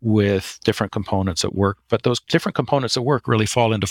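A short speech recording with nothing technically wrong to point to anywhere in the signal.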